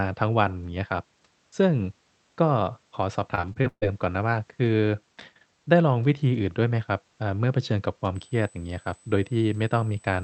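From 3.35 to 3.84 s, the call's packet stream broke down repeatedly: packets were lost or arrived too late, leaving five gaps in under half a second, and each hole was bridged by stretching out the last received sound. About 220 ms of real speech is missing, the longest single gap 139 ms, so nearly half that stretch is synthetic fill. The result is repeated packet loss with a robotic sound, choppy, with chunks of speech dropping out.

From 8.15 s to the end, a USB whine appears. Current drawn by the USB bus in 125-microsecond microframes is leaking into the audio through the power or ground, producing a steady tone at 8 kHz, right at the top edge of the Opus call path's band. It sits roughly 30 dB below the speech, so it comes across as a thin, fixed-pitch whistle riding continuously above the speech.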